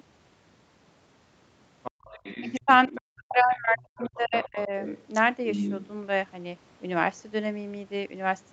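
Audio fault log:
1.83–2.61 s, 2.95–3.22 s, 3.53–5.01 s and 5.48–5.87 s, other side's voice leaking through: the echo canceller likely failed to remove the loudspeaker signal from the microphone, so a second, fainter voice runs under the talker, roughly 10 to 20 dB down and loudest at 5.48–5.87 s.
1.91–2.03 s, background gated by the echo canceller: the canceller clamped the microphone while the loudspeaker was active, so the room sound drops by about 33 dB for roughly a tenth of a second, then returns as the gate releases.
2.60–4.72 s, speech suppressed in double talk: with both sides talking together, the canceller likely could not separate near talk from echo and attenuated everything, so the talker's speech dips and breaks up, by up to around 40 dB, for about a second and a half in total.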